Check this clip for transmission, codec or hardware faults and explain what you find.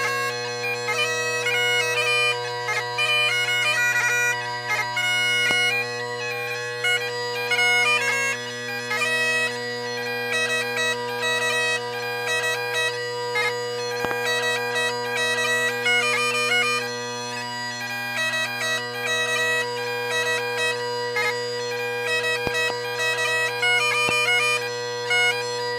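Four loud pop events stand out, sharp transients peaking roughly 15 dB above the surrounding sound, which continues underneath. Single pops fall at 5.51 to 5.53 s and 24.09 to 24.11 s, and double pops at 14.05 to 14.13 s and 22.47 to 22.72 s. Each is likely a sudden voltage pulse from a connector, switch, static discharge or driver glitch entering the signal path.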